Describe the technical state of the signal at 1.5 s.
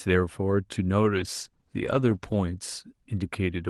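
At 1.5 s the signal sits inside a call bitrate drop running from 1.19 to 2.47 s. The call's bandwidth estimate fell, so the Opus encoder had far fewer bits per frame and had to quantise the speech more coarsely, which fits a step from 32 kbps down to 16 kbps, held at its lowest for about 1.2 s. The speech turns rough and watery, with smeared detail, until the coding rate recovers near 2.47 s.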